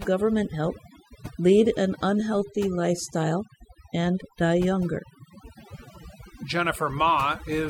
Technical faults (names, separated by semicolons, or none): overdone noise removal